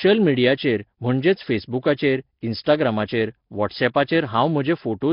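From start to end, a steady USB whine sits at a fixed 8 kHz, roughly 25 dB below the speech. It is the bus's 125-microsecond microframe rate leaking through power or ground, not mains hum's low buzz. Throughout, the speech is rough, with a hissy halo, smeared and underwater-sounding, and nothing above 5.3 kHz. This is likely Nellymoser compression, at a rate that fits roughly 22 kbps, filling starved bands with noise rather than leaving MP3-style warbling gaps.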